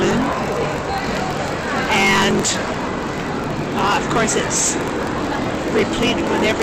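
A steady buzz near 45.9 Hz runs through the whole sound, which also plays about 1.07 times too fast while keeping roughly its normal pitch. This is a block size mismatch (truncated): each block, which fits a 1024-sample write, loses its tail before the next stage reads it.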